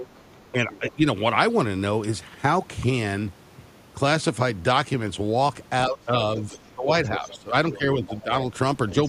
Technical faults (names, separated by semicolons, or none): other side's voice leaking through; speech suppressed in double talk